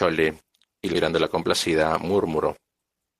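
At 0.93 to 0.95 s the speech suffers a skip ahead. Roughly 0.7 s of audio never gets played. It was either lost in transit or discarded by a jitter buffer that overflowed while later audio was already queued. Nothing fills the hole. The sound on either side is butted together almost directly, so the speech jumps forward abruptly. Part of what was being said simply vanishes, with no pause to mark it.

From 1.11 s to the end there is a jitter buffer speed-up. The buffer was holding more audio than its target, as happens when delayed packets arrive in a burst. To shrink that backlog, the receiver cut out short slices, one or a few pitch periods at a time, over and over. About 0.2 s is removed in total. The speech plays at 109% speed while keeping its pitch. It sounds noticeably hurried.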